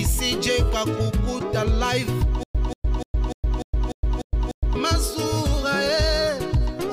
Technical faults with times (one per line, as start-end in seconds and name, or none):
2.43-4.76 stutter with silent gaps